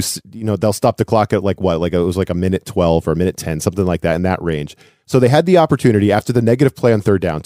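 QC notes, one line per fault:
No technical faults are audible in the signal, with level, timing and continuity holding steady across the whole of the speech.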